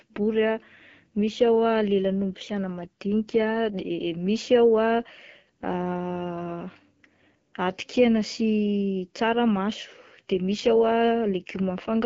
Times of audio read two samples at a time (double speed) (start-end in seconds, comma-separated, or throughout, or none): none